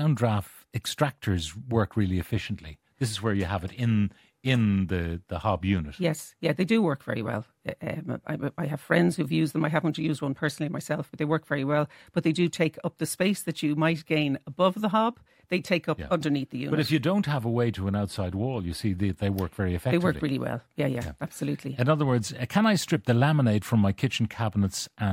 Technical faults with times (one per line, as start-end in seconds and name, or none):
none